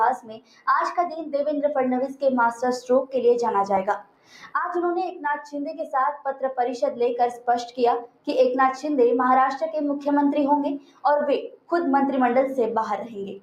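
From the start, a noise suppressor applied to music or sounds treats sustained material as noise, so level swings by around 10 dB: attacks survive while held parts and tails sag. A waveform shows a pumping envelope, and a spectrogram shows decays thinning early.

Sound cut by the noise suppressor appears at 0.17–0.67 s, 3.99–4.54 s, 8.06–8.28 s, 10.79–11.04 s and 11.49–11.72 s, dropping about 18 dB (about 17 dB at 10.79 s). Each shows as a sudden dark gap on a spectrogram and a pinched envelope on a waveform.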